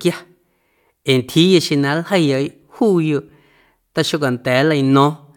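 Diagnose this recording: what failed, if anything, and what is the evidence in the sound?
Nothing in this speech recording points to a failure at any stage of the chain. There is no audible event that calls for a diagnosis.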